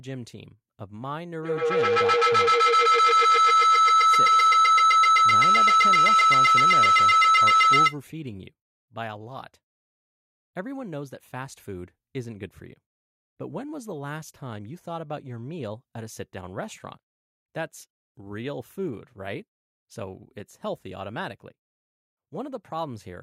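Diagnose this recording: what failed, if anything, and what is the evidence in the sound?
Feedback howl, 1.43 to 8.02 s: two call devices in one room form an acoustic loop that gains level on each pass, narrowing to a tone near 1.5 kHz about 14 dB above speech and pulsing roughly every 150 ms. A spectrogram shows one bright horizontal line, and the waveform shows swelling rhythmic bursts.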